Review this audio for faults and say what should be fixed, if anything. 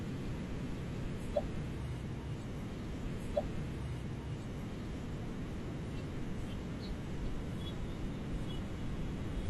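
A stream segment is repeated from 3.01 to 5.01 s. The player queued the same 2.0 s of speech twice, with a small blip at the jump back. Unlike a stutter or buffer loop, a whole continuous stretch replays cleanly. Deduplicating segments by sequence number before queuing them would prevent this.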